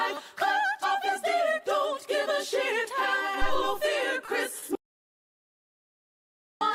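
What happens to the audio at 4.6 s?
At 4.59 to 4.64 s there's a short stall from a late packet: the receiver stretches the last sound about 30 ms while waiting, so it hangs briefly with a faint buzz or dip, nothing lost.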